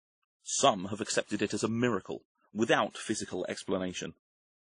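Throughout the speech, two layers of compression artefacts sound together, with nothing above 10.1 kHz. This is likely transcoding between lossy codecs, pointing to a low-rate MP3 re-encoded as WMA. Unlike single-codec damage, the different artefacts of each codec stack rather than forming one consistent artefact.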